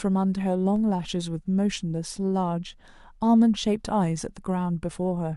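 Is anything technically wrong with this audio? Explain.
Yes. A DC step at 0.76 s shifts the waveform's zero line abruptly, then decays back through a 5 Hz high-pass, producing a brief low thump under the speech.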